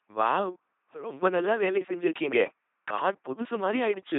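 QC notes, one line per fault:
Throughout, LPC-10 vocoder: the speech is heavily mangled into a buzzy, robotic voice with nothing above 3.8 kHz. Each moment is rebuilt as pure buzz or pure hiss through a simple ten-pole filter, which fits a 2.4 kbit/s vocoder.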